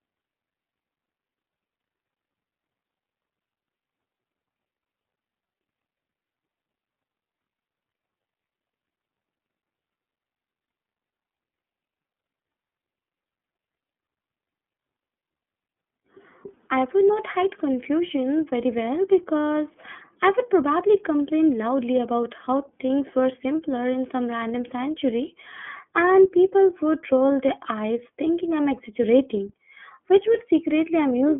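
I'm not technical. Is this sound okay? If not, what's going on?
No. From start to finish the speech sounds thin, muffled and a little rough, like a phone call, with nothing above about 3.8 kHz. That is the iLBC codec, a phone-line compression scheme that rebuilds the speech in separate 30 ms slices.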